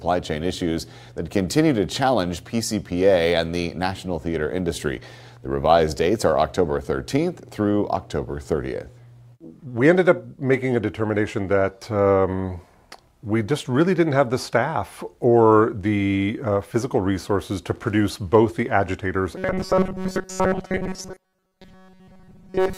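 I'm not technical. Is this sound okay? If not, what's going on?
No. From 19.36 s to the end, new audio likely arrived too slowly, so the system kept replaying tiny 5 ms slices instead. This is robotic sound from repeated short buffers: most of the sound becomes a rigid, metallic buzz near 188 Hz.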